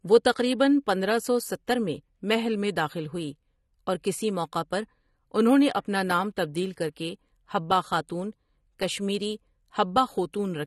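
Throughout, the speech is cut off above 12.3 kHz and sounds dull and smeared, likely AAC compression (AAC-LC) at a low bitrate near 32 kbps.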